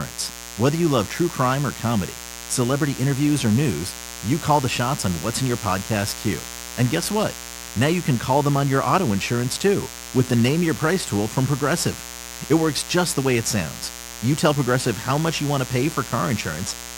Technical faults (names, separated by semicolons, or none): mains buzz